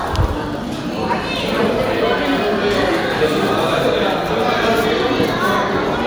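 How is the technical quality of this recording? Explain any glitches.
No glitches or faults are audible.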